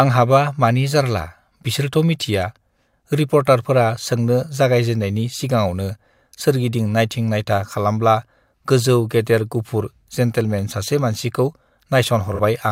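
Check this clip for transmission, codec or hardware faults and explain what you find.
There's one fault, right near the end of the speech at about 12.34 to 12.40 s: AAC frame loss with concealment. Roughly 43 ms of audio went missing, which fits a single lost AAC frame. The decoder patched the gap by reusing the last good spectrum with randomised phase, so there's no dropout. Instead you get a brief smeared, noisy, phasey blip where the sound loses its crispness for a moment before clean decoding picks back up.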